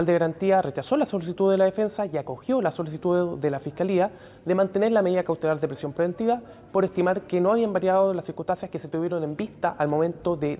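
No technical faults can be heard anywhere in it.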